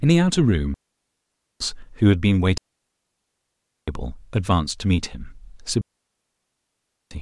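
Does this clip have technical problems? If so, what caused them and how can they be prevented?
Yes. Digital wireless dropouts occur at 0.74 to 1.60 s, 2.58 to 3.88 s and 5.81 to 7.11 s, muting the speech for about 0.86 s, then 1.3 s twice. Each time the receiver lost too much of the radio data stream and muted with a very short fade, leaving a clean hole of near silence with no noise burst on either side. Keeping the transmitter within range and in line of sight of the receiver, and away from crowded frequencies, prevents this.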